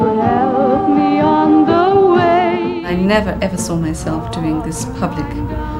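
No technical faults are audible anywhere in the audio.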